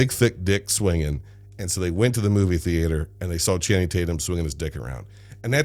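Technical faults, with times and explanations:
Throughout, mains hum. A steady low tone sits at 50 Hz under the speech, roughly 25 dB below it. Power-line current is leaking into the signal path, probably through a ground loop or a nearby transformer. Some low harmonics come with the tone.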